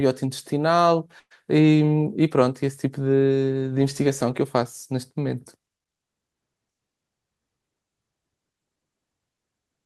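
At 1.19 to 1.33 s comes a burst of packet loss: about 120 ms of speech never arrives. The receiver stretches the last sound and fades it down for about 110 ms, unlike a plain dropout's abrupt silence, before speech resumes further on.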